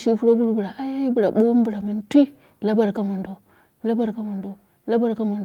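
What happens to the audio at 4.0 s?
Nothing goes wrong at 4.0 s; the speech carries on intact through that moment, with no dropout, click or distortion.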